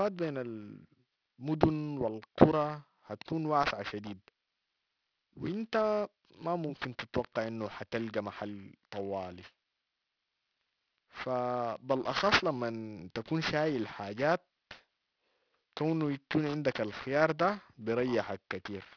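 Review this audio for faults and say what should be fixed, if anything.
Aliasing runs through the whole speech clip. Sibilants sound gritty and metallic. Energy piles up hard against a 5.5 kHz edge. High content has folded back below it at fairly strong levels. That points to a drop from 44.1 kHz to about 11 kHz without filtering. Apply a low-pass anti-aliasing filter below the new Nyquist frequency before downsampling.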